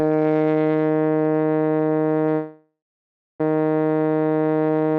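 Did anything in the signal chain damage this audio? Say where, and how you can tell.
Yes. At the network stage, the music stalls from 2.34 s to 3.41 s in a call audio freeze. The last sound is held on as a fading buzz that settles into about 0.63 s of silence, and the music then resumes exactly where it stopped, now running about 1.05 s late. A delay in the packets' arrival, which likely emptied the jitter buffer, fits this. It differs from packet loss because no passage is skipped. A gap has been inserted instead.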